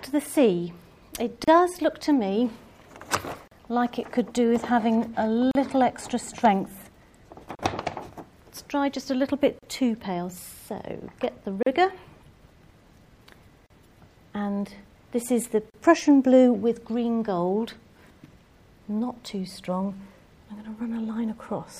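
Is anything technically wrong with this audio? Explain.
Yes. Silences of about 35 to 38 ms, with abrupt but smeared edges, break the sound at 1.44, 3.48, 5.51, 7.55, 9.59, 11.63, 13.66 and 15.70 s, one every 2 s, and the sound resumes where it stopped. Each is a gap at a join of encoded pieces: separately encoded segments were joined with their encoder delay and end padding left untrimmed.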